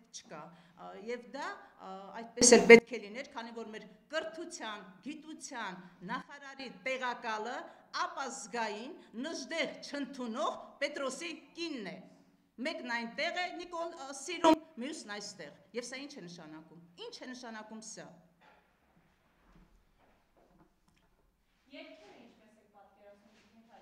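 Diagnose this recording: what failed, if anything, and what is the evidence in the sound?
Sound and background noise step in level together, with no fade: up about 24 dB at 2.42–2.79 s, down about 12 dB at 6.22–6.60 s, up about 20 dB at 14.44–14.54 s. This sudden gain jump is likely a digital gain change applied without a ramp.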